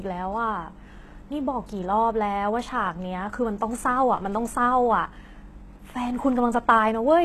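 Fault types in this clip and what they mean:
HE-AAC compression: the speech's s sounds are gritty and lispy, with bright but artificial treble ending near 12.3 kHz, not simply dulled, likely from HE-AAC around 16 kbps.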